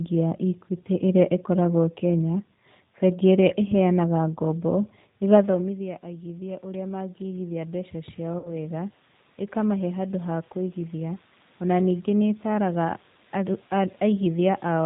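Throughout, the speech sounds rough and slightly synthetic, with nothing above 4 kHz. This is plainly audible G.729 codec damage, consistent with an 8 kbit/s coder that rebuilds speech from a simple model.

From 8.39 to 8.54 s the sound smears and fades, and stays weak briefly. This is VoIP packet loss concealed by the speech codec, extrapolating across roughly 50 ms of missing frames.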